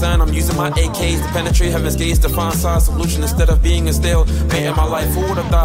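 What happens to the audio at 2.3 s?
Nothing goes wrong at 2.3 s: the audio plays through that moment intact, with no dropout, click, distortion or other fault.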